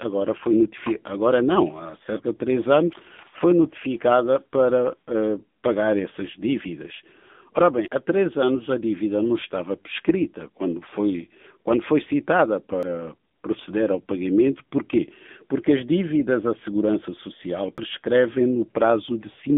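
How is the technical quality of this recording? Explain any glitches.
The recording is plainly degraded: it went through a low-bitrate mobile codec, and it has four short skips.

The AMR narrowband mobile codec runs throughout at 7.95 kbps. It rebuilds the speech from a vocal-tract model driven by sparse pulses, which makes it plainly buzzy and synthetic. A spectrogram shows energy only between 200 Hz and 3.6 kHz, with nothing above 3.7 kHz.

Audio is missing between chunks at 2.93, 7.88, 12.83 and 17.78 s. Each time, roughly 50 ms vanishes and the two sides butt together as an abrupt skip. The regular five-second spacing points to a likely chunked recorder losing audio at each handover. In the waveform, each skip shows as a hard splice with no silent gap.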